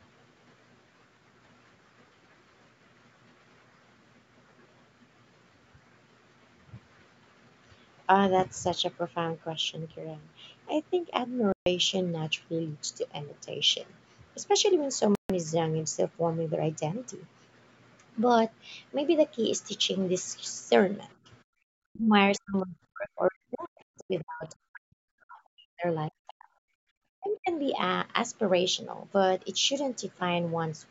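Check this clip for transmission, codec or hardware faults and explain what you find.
The clip has two short playback dropouts, repeated dips in the talker's speech during double talk, a brief scrap of the far-end voice, and one drop in the room sound.

Bluetooth stall: at 11.52 s and 15.15 s the speech cuts to full silence for about 0.14 s, then resumes. This is likely a wireless buffer running dry. It differs from echo-canceller gating because the silence is total and the level doesn't ramp.

Speech suppressed in double talk: at 21.21, 21.78, 22.38 to 25.10, 25.27, 26.10 and 27.18 s the speech drops by about 25 to 40 dB in pieces. This is likely the echo canceller ducking the talker while the far end spoke. The speech dips in pieces.

Other side's voice leaking through: at 23.98 s a brief trace of a second voice appears, about 25 dB below the speech. This is likely residual loudspeaker echo that the canceller failed to remove. 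It adds a voice that wasn't there, whereas suppression takes sound away.

Background gated by the echo canceller: from 26.74 to 26.90 s the room sound falls by about 40 dB for roughly 150 ms while the loudspeaker plays, then returns. Unlike the suppression events, this dip hits the room background, not the speech.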